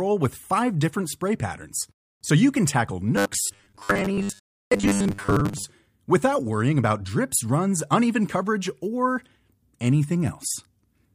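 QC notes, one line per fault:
3.17 to 5.64 s, robotic sound from repeated short buffers: After "so you can tackle", the speech turns into a hard, metallic buzz pitched at 100 Hz until "without worrying about drips". The words stay roughly traceable, but most of the real audio in this stretch is lost. The likely cause is late audio delivery, with the playback side looping the last 10 ms chunk to fill gaps. That fixed 10 ms repeat imposes the 100 Hz pitch.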